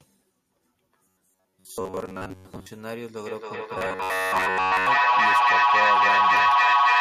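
From 1.04 to 2.66 s the speech turns into a rigid, metallic buzz. This is robotic sound from repeated short buffers. The buzz sits at 93.8 Hz, which fits a loop of about 10.7 ms. Most of the audio here is repeats. Gaps in delivery are the likely cause.

At 3.26 s a feedback echo between two devices starts and runs to the end. Another device plays this audio back into the microphone. Each phrase returns about every 0.3 s. The repeats pile up, peaking about 12 dB above the speech.

From 3.78 to 4.88 s the same 93.8 Hz robotic buzz returns on top of the echo.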